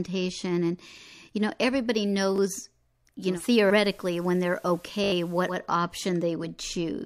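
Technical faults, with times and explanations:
2.36 to 2.38 s, repeated buffer: right after "and you know everybody", a 20 ms chunk plays one extra time because fresh audio arrived late. It comes across as a quick click with a hard join, and around 20 ms of real audio goes missing.
3.28 to 5.58 s, digital radio blending to analogue: the receiver loses its digital stream and cross-fades over roughly 130 ms to the FM broadcast, then back. Hiss rises to about 30 dB under the signal, with a level shift of about 1 dB.
5.04 to 5.12 s, repeated buffer: this time the same 20 ms piece plays four extra times back to back, so it turns into a short buzzy stutter at a 50 Hz repeat rate, and roughly 70 ms of audio is lost.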